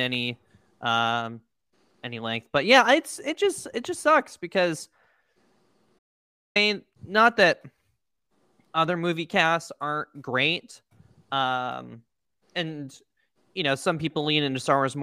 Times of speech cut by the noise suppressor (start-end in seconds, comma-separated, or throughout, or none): none